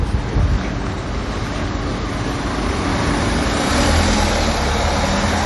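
Throughout the clip, MP3 compression is the likely cause of plainly audible damage: nothing remains above 11.4 kHz, and weak components flicker in and out between frames, giving a watery, swirling texture that a simple low-pass filter wouldn't produce, which fits a low bitrate around 48 kbps.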